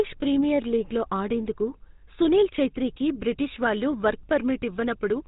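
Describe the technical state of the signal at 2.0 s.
At 2.0 s the speech carries GSM full-rate codec damage, present throughout. Pulse-driven vocal-tract modelling and a 4 kHz ceiling leave a plainly audible buzzy, gravelly roughness, consistent with 13 kbps.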